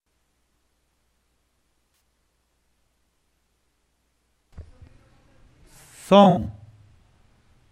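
AAC frame loss with concealment hits twice: a 64 ms smeared, phasey patch at 1.94 s, then scattered dropouts from 6.23 to 6.46 s, longest run around 70 ms, where the decoder patches the gaps with guessed spectrum.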